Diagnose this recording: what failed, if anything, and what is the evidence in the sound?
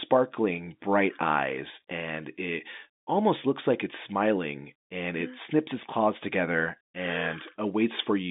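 Nothing failed: the recording is ordinary G.711 telephone speech, limited to the phone band with nothing above about 3.8 kHz.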